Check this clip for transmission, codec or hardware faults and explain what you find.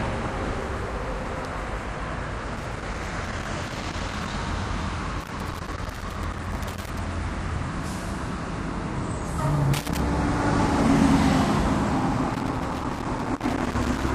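Loose connector crackle appears in four bursts: 2.56–4.30 s, 5.20–6.99 s, 9.74–10.0 s and 12.30–14.10 s. A worn or dirty contact is intermittently making and breaking, chopping the signal on and off while any DC on the line snaps in as pops, giving irregular scratchy crackle. On a waveform these stretches show ragged dropouts and sharp spikes. A spectrogram shows scattered full-height vertical streaks across the band.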